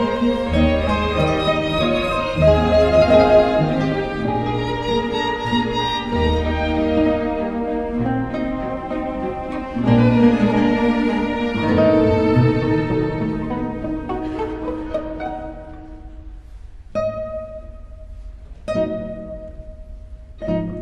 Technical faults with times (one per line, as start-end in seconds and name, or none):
none